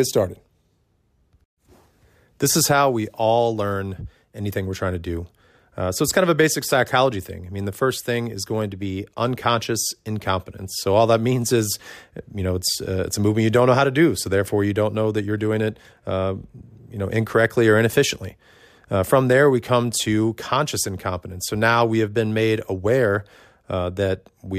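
Speech recording with no audible technical faults.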